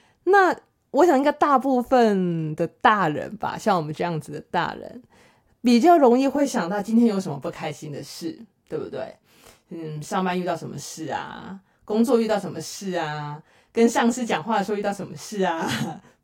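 From 6.36 s to the end, channel delay (comb filtering): one side lags by around 20 ms before mono summing, carving fixed notches from near 20 Hz, sounding rough or slightly doubled.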